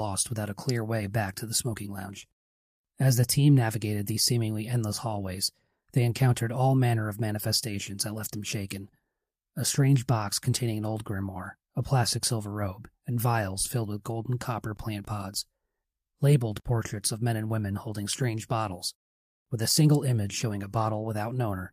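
No technical faults can be heard anywhere in the recording.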